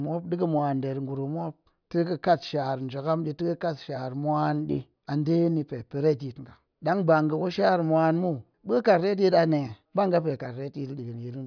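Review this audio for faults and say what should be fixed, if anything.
No faults; nothing needs fixing.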